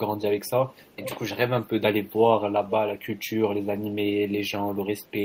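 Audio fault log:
0.95–1.17 s, echo leak: a delayed copy of the speech returns 456 ms after the original, roughly 10 dB quieter, likely a far-end loudspeaker reaching its microphone past an incomplete echo canceller. Unlike room reverb, it is a distinct repeat, not a smooth decaying tail.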